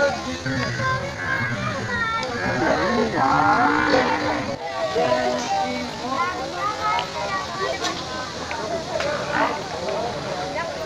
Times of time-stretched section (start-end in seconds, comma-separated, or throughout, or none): 0.00-7.60